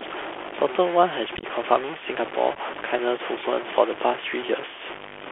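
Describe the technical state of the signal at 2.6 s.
At 2.6 s the Bluetooth headset link is just recovering from unconcealed packet loss between 2.55 and 2.58 s: roughly three short voice packets, about 11 ms of audio, never arrived and were filled with silence or an idle pattern. The speech breaks off with abrupt edges and returns briefly quieter.

Underneath, the Bluetooth CVSD headset codec is shaping everything. Its one-bit up/down coder, consistent with a 64 kbps link, has a step size that lags fast, loud changes. This leaves a band of about 300 Hz to 3.4 kHz, scratchy sibilance and a plainly audible granular hiss.

There is also a coarse, grainy distortion that moves with the level of the speech. The error sits only about 10 dB below the signal. That points to truncation to about 5 bits without dither, which is the likely cause.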